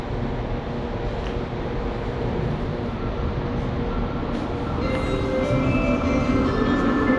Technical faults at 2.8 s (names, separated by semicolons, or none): none